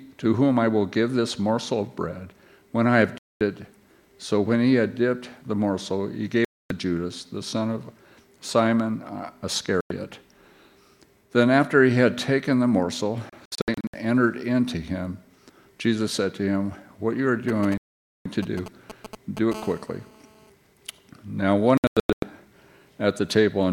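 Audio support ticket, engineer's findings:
Digital broadcast dropout: audio mutes at 3.18–3.41 s, 6.45–6.71 s, 9.81–9.91 s, 17.78–18.26 s, and as clusters of short holes at 13.30–13.94 s and 21.78–22.23 s. Receiver decoder: corrupt or missing frames fail the check, output muted until clean frames resume. Gap lengths step in multiples of about 32 ms, pointing to a 32 ms frame. Programme content in the gaps is gone, not delayed.

GSM signalling bursts: galloping ticks with brief 217 Hz buzz fragments, 17.49–19.54 s, at a fairly high level, roughly 10 dB under the programme. Overlaps the 17.78 s dropout. Source: a nearby 2G handset in signalling mode, sending sparse burst groups at a 216.7 Hz rate. The audio circuit rectifies the RF envelope into the audio band.

GSM phone buzz: steady, harsh buzz at 216.7 Hz, rich in harmonics, 19.54–20.50 s, about 20 dB below programme, unrelated to the content. 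Follows straight on from the signalling bursts. This marks a handset in a call with continuous TDMA bursts. The audio front end demodulates the RF pulse train. Fix: shielding or RF filtering at the input, or keep phones away from the receiver.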